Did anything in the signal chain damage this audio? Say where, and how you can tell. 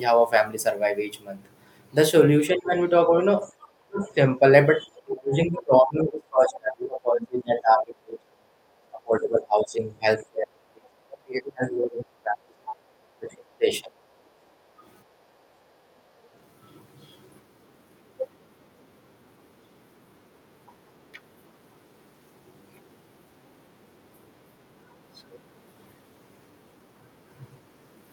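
Yes, the damage comes from call processing, specifically the echo canceller on the talker's end. The first problem is speech suppressed in double talk, most likely because the canceller could not tell the talker's voice from loudspeaker echo while both sides were active. The speech sinks at 2.5 to 2.71 s, 3.81 to 4.03 s, 4.83 to 8.51 s, 8.91 to 12.82 s and 13.19 to 13.9 s. The first dip loses roughly 15 dB. The long stretches fall by around 30 dB, and one dip reaches about 35 dB.

The other side's voice is leaking through from 4.04 to 4.14 s. This is likely residual echo that the canceller failed to subtract from the microphone signal after the loudspeaker played the far end. It appears as a brief, faint scrap of a second voice right after a suppressed passage. It sits roughly 30 dB below the talker, so it registers as a faint ghost rather than a clear overlap.

The background is gated by the echo canceller at 14.18 to 14.83 s and 15.37 to 16.07 s. 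While the loudspeaker is active, the canceller clamps the microphone down, and the room tone drops by about 8 dB for roughly two-thirds of a second each time. The ambience then returns once the canceller releases. That pumping of the noise floor is what gives the gating away.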